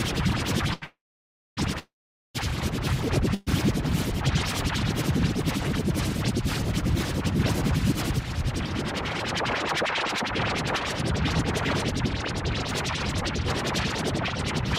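At 0.73 s a short stall from a late packet holds the current sound for about 80 ms with a faint buzz or dip, then picks up exactly where it left off. Nothing is skipped, and the brevity and lack of silence set it apart from a freeze. Call audio freezes follow at 0.84 to 1.59 s, 1.79 to 2.36 s and 3.34 to 3.49 s, likely from packets held up in transit until the jitter buffer emptied. In the first two the stretched sound fades to about 0.6 s and 0.43 s of silence. The last is a 0.12 s buzz or hiss with no silence. Each resumes without loss, pushing everything later.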